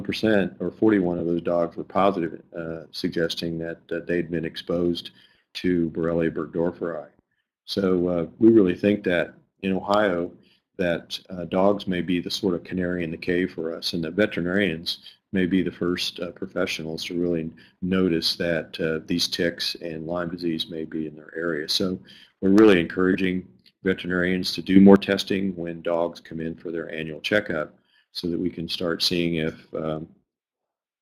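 At 1.19–1.21 s and again at 23.13–23.15 s, lost LE Audio frames leave brief gaps, which fits 20 ms of lost audio. The LC3 decoder fills each with a noisy, smeared copy of the preceding spectrum.

At 24.76 s a sudden gain jump lifts sound and background together by about 9 dB until 24.96 s, likely from a gain change applied without a ramp.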